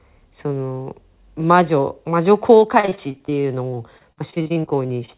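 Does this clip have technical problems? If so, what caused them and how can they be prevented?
Yes. From 2.8 to 5.1 s the network repeatedly lost or delayed packets, giving repeated packet loss (robotic sound). About two dozen short holes, the longest 44 ms, were patched by extending the preceding sound, so about 22% of that stretch is choppy, synthetic-sounding fill. A steadier connection, wired or less congested, with a larger jitter buffer or forward error correction, would prevent it.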